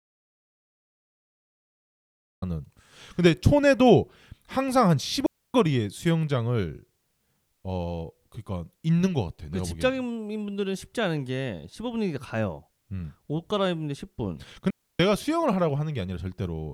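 Audio dropout to silence runs from the very start to 2.42 s. The clip opens on pure silence, with no room tone at all, and the speech only begins once the signal returns. This sounds like the input was already lost when recording began, most likely through a disconnected source, a failed link or a mute, while the recorder kept writing silence. Whatever was happening during those first seconds is gone.

Digital wireless dropouts follow at 5.26 s and 14.70 s, each a clean hole in the speech of about 0.28 s and 0.29 s. Both times, the wireless receiver lost too much of the incoming data and muted its output with a very quick fade rather than pass corrupted audio. The result is an abrupt near-silent gap, with no crackle or noise burst on either side, and the speech resumes just as cleanly.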